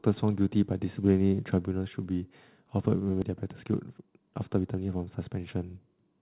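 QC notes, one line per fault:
3.22 s, skip ahead: playback jumps forward with no gap filled, so roughly 0.7 s of speech simply never plays and the audio on either side of the cut is butted together. This points to a stretch being dropped on the way or discarded by an overfull jitter buffer while later audio was already queued, which pulls the delay down by about the same amount in one step.
3.31 to 4.96 s, jitter buffer speed-up: the speech runs at about 114% of normal speed while the pitch stays put, making this stretch sound hurried. Short slices of one or a few pitch periods were cut out again and again, removing something like 0.2 s in total, as the receiver worked to drain a buffer holding more audio than it targets. The band-limited sound of the G.711 mu-law call path, with nothing above 4 kHz, runs underneath both events.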